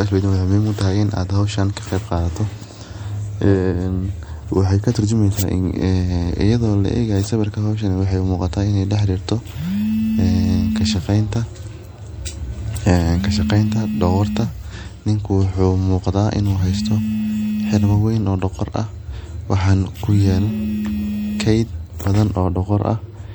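All the way through, the speech has that watery, swirly MP3 compression sound, with dulled treble and chirpy s sounds, likely from a low bitrate around 64 kbps.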